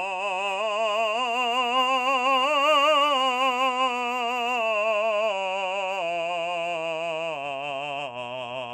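A music clip that was likely squeezed through MP2 compression at a low bitrate, around 80 kbps by the sound of it, so upper sub-bands are starved and switched off. Nothing survives above 14.4 kHz, leaving it dull and gurgling throughout.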